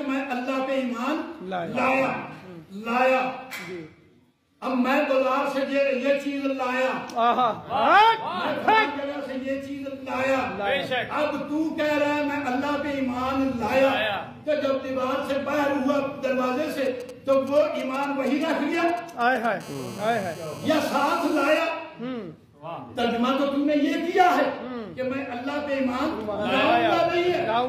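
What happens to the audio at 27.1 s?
Nothing goes wrong at 27.1 s; the audio runs through that moment intact, with no dropout, click or distortion.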